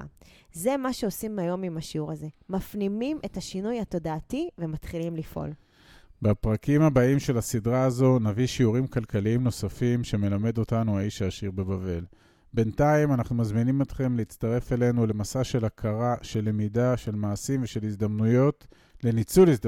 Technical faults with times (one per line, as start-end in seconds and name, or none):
19.39-19.44 hard clipping